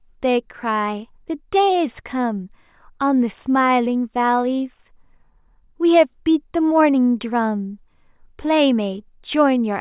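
The speech recording shows no technical faults at any point.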